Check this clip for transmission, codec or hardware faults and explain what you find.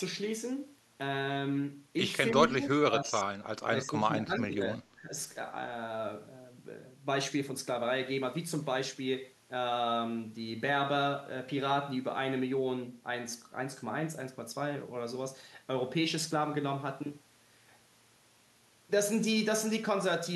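Three stretches of the speech drop in level: 2.47 to 2.7 s, 2.86 to 3.29 s, and 3.68 to 5.14 s. The likely cause is speech suppressed in double talk. While both sides were speaking, an echo canceller could not tell the near talker from loudspeaker echo and turned both down. The voice sinks by about 10 dB in the first and last stretches and by about 20 dB in the second.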